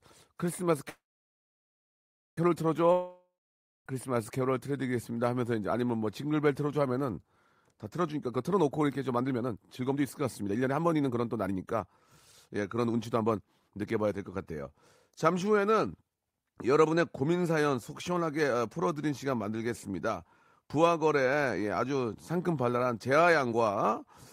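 Speech, with two gaps early on and two stretches of hurried delivery. From 0.89 to 2.38 s there is a call audio freeze: the last sound is carried on as a fading buzz or hiss and then about 1.38 s of silence or low steady noise, after which the speech resumes exactly where it stopped. The likely cause is held-up packets draining the jitter buffer. What marks it as a freeze rather than a dropout is that nothing is lost; roughly 1.5 s of delay is simply inserted. From 2.92 to 3.87 s a long network dropout sounds similar, with a fading continuation and then about 0.56 s of silence, but here the speech comes back further on. About 0.94 s of audio was never played, most likely because no packets arrived for that stretch. That missing piece, rather than a pause, is what sets it apart from the freeze. The last fault is a jitter buffer speed-up, from 8.01 to 11.88 s at about 128% speed, shedding around a second of audio, and again from 12.48 to 14.63 s at about 118%, shedding roughly 0.4 s. 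The receiver trims short pitch-period pieces over and over to shrink an overfull buffer. The speech sounds rushed but keeps its pitch, which distinguishes it from a plain playback-rate change that would raise the voice.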